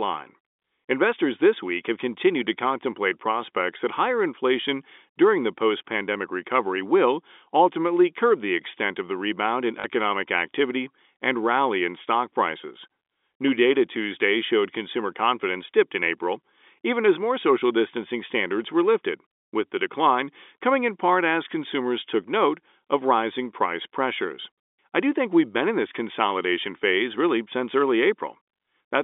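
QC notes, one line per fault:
9.80–9.84 s, packet loss with the last packet repeated: right after "of the rebound in" there's a 40 ms robotic stutter before "activity and rally in" picks up. The receiver kept replaying the last chunk it had, and the gap length fits two lost 20 ms packets. The loop repeats at the packet rate, so the run has a brief 50 Hz buzz, heard over the narrow telephone band of the G.711 line.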